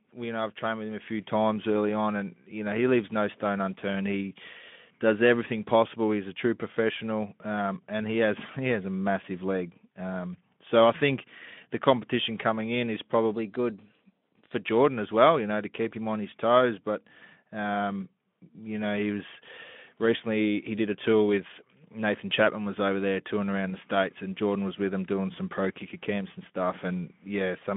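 Just after "competition coming in is", at 13.34 s, the speech jumps about 6% faster and rises by about a semitone. It holds there for 1.2 s and snaps back at 14.54 s. Speed and pitch move together, so this is likely a drift correction step. Software matching two clocks changed the playback rate in one step to adjust its buffer. The shift sits on the narrow Speex-coded line, which stops near 3.7 kHz.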